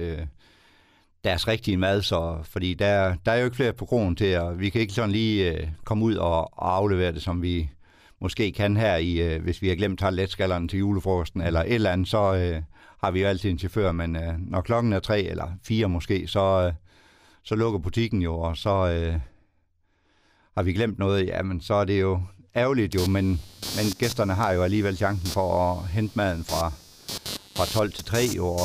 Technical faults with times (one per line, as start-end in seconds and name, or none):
22.92-28.64 computer activity noise